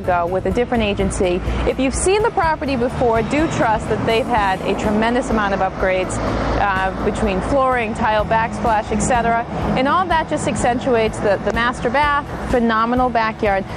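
Nothing technically wrong can be heard anywhere in the audio. There is no audible disturbance at any point.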